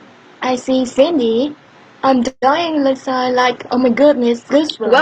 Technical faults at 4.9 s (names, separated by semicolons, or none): none